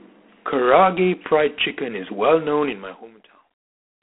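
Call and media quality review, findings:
G.726 ADPCM, whole clip: harsh rasping hiss riding speech level, consistent with 24 kbit/s coding. Band 200 Hz to 3.4 kHz, nothing above 3.8 kHz. Spectrogram: hard ceiling, noise smeared under formants.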